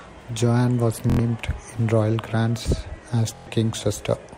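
Bluetooth stutter at 1.10 to 1.19 s and 3.35 to 3.47 s: late or lost packets made the receiver replay its last buffer, giving a buzzing repeat, not silence like a dropout. Speech then resumes about 93 and 116 ms further on, which fits several lost packets.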